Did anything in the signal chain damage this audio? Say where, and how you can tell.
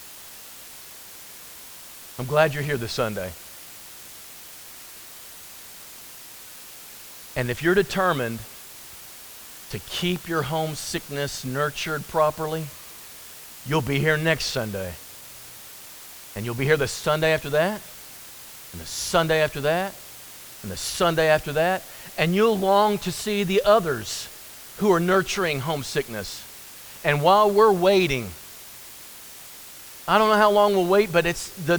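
Yes. An even, undistorted hiss sits about 20 dB below the speech throughout. This is low bit depth with dither: 7-bit sample-format conversion, where dithered rounding turns quantisation error into white noise.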